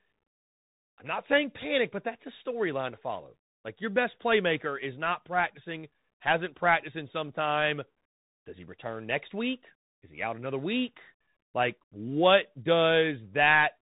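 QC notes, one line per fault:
throughout: Bluetooth CVSD headset codec. Plainly audible damage. Nothing above 3.8 kHz survives, and the one-bit slope tracking, which fits a 64 kbps stream, leaves scratchy sibilants and granular hiss.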